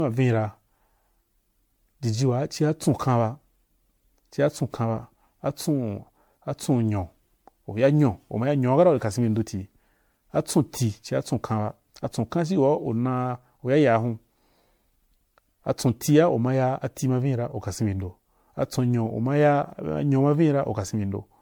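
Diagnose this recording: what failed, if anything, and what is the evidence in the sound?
The codec stage is where this went wrong: the speech sounds swirly, hollow and smeared from start to finish, with consonant attacks blurred. That points to generation loss, most likely from around seven rounds of MP3 encoding near 96 kbit/s, each pass stacking fresh quantisation noise and spectral holes.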